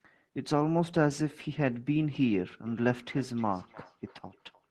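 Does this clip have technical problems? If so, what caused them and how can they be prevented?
Yes. Feedback echo between two devices runs from 2.66 s to the end, repeating roughly every 300 ms at about -25 dB: another device replays this microphone's signal, which is recaptured. Prevent it by muting the speaker and microphone on all but one device in the room.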